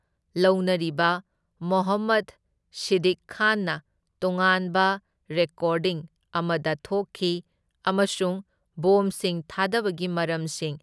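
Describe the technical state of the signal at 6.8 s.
The speech at 6.8 s comes through intact, with no dropout, distortion or other fault at that moment.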